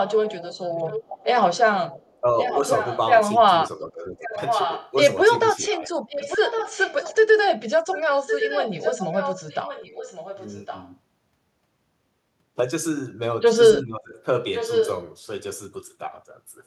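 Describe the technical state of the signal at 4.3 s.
At 4.3 s the speech is being suppressed in double talk. From 3.86 to 4.34 s the voice sinks by around 15 dB, likely because the echo canceller couldn't separate this talker from loudspeaker echo while both sides spoke, so it turned everything down.

Overlapping that, an echo leak runs from 4.25 to 4.92 s. A copy of the voice returns about 1.1 s late and only about 5 dB below the live speech, likely because the far end's loudspeaker pickup wasn't fully cancelled and got sent back.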